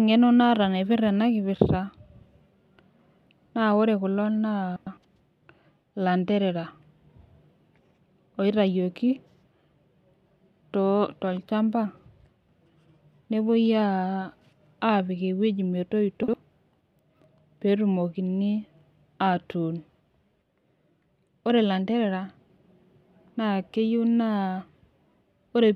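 Frames out of order in this speech recording: at 4.76–4.97 s, 16.23–16.34 s and 22.42–22.58 s, two neighbouring blocks of 104.5 ms, 52.2 ms and 78.4 ms were decoded swapped. Each stretch plays its halves exchanged, a garbled flutter, with no time lost.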